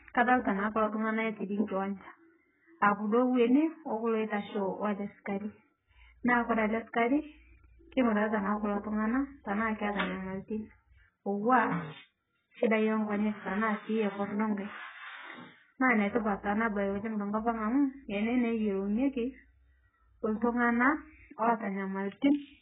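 From start to finish, the speech has nothing above 3.7 kHz and sounds dull, smeared and warbly, with fizzy sibilants. This heavy damage points to low-bitrate AAC compression, likely AAC-LC near 8 kbps, whose coarse quantisation lowers the cut-off and leaves spectral holes.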